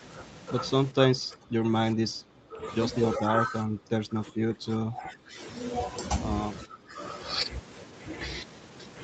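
Speech suppressed in double talk pulls the voice down at 0.91–0.97 s, 1.14–1.74 s, 1.94–2.62 s, 3.18–5.4 s and 6.65–7.0 s, with the deepest dips about 10 to 20 dB. The likely cause is an echo canceller that took the talker for loudspeaker echo while both sides spoke and turned the voice down. Unlike packet-loss gaps, these are level ducks that sag.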